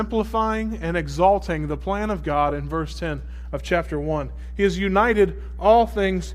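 A steady mains hum sits under this speech clip from start to finish, a low tone at 60 Hz that never lets up, even in the gaps between phrases. It's loud, too, only about 10 dB below the speech, so it's hard to ignore. That's the power line bleeding into the signal, most likely through a ground loop somewhere in the chain or a transformer parked too close to the gear or cabling.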